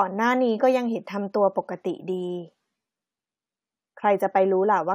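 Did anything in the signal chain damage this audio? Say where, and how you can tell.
No, nothing in the signal chain has audibly damaged this speech recording, and it reaches the listener intact at every stage from capture to playback.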